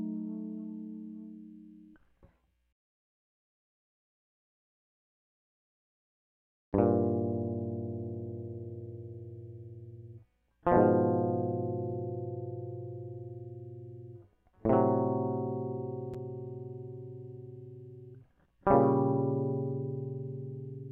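No technical faults are audible.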